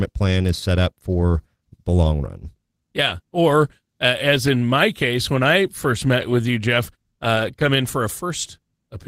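No technical faults can be heard anywhere in this speech recording. There is no event in the audio that calls for a time or a description.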